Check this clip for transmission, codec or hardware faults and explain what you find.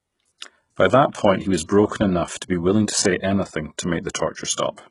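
One codec fault runs through the whole speech clip, likely HE-AAC compression at a very low bitrate, around 12 kbps. Treble is rebuilt from copied lower bands, leaving gritty, metallic sibilants and nothing above 11.1 kHz.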